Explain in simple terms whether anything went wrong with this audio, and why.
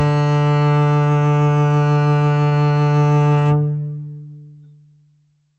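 Around 2.47 to 2.67 s the music briefly hangs: one moment gets held a bit too long, with a faint buzzy, slightly dipped quality, and then it carries on right where it left off. That's a short stall from a late packet. A chunk of audio arrived late, the jitter buffer ran dry, and the receiver stretched the last sound by about 41 ms to cover the gap. Nothing is lost, but everything after it runs that much later.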